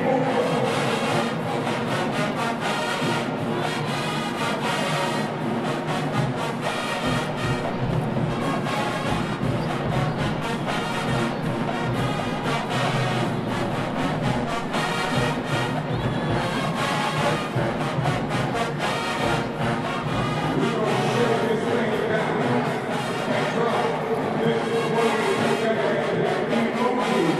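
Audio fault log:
17.65 s, bit error spike: a single sample jumps to about -34 dBFS and drops straight back on the next sample, producing one short, dry tick. A flipped bit in memory or on a digital link moves a sample value by a power of two, so the tick has no relation to the surrounding sound. Because it is one isolated sample, its energy spreads across the whole spectrum rather than sitting at any pitch.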